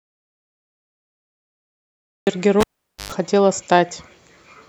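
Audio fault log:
0.00–2.27 s, audio dropout to silence: the clip opens already in a dead gap, with silence and no room tone or noise floor, until the speech arrives at 2.27 s. This likely comes from an input lost upstream, for example a disconnected device or an accidental mute, while the recorder kept writing silence. The waveform is a flat line, and the spectrogram is empty black across every frequency until the speech energy begins abruptly.
2.61–3.12 s, cable pulled and plugged in: a sharp pop marks a live cable being pulled at 2.61 s. About 0.46 s of near silence follows, including roughly 0.11 s of 50 Hz mains buzz as only the plug tip makes contact, and a second pop as the full signal returns at 3.12 s. On the waveform, two tall single spikes frame a near-flat stretch. The spectrogram shows bright vertical lines at both pops and stacked horizontal bands at 50 Hz and its harmonics during the buzz.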